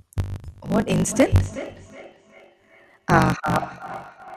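A speech recording with two faults. A block size mismatch (truncated) runs throughout. One stage writes longer blocks than the next reads, which fits a 1,024-sample write, so each block's tail is discarded. This produces a 50 Hz buzz and speech running 1.16 times fast with its timbre kept. A spectrogram would show vertical seams every 20 ms. From 0.37 s to 4.36 s there is feedback echo between two devices. One device's microphone recaptures another's playback, and neither echo canceller removes it, so each phrase returns roughly every 0.4 s, thinner and ringing, peaking at about 16 dB below the speech. The waveform would show fading copies trailing each phrase.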